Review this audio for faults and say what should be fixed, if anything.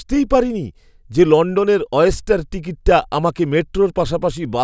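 Nothing needs fixing; no faults were heard.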